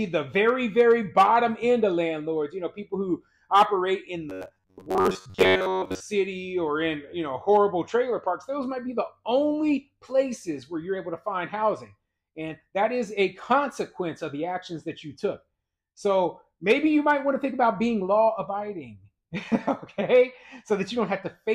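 From 4.30 to 6.04 s the sound takes on a robotic quality from repeated short buffers: a rigid, metallic buzz at 93.8 Hz, likely from a segment of about 10.7 ms looped when fresh audio arrived too late, with most of the real signal skipped. Unlike a stutter, the repeats fuse into a steady pitched drone rather than audible jumps.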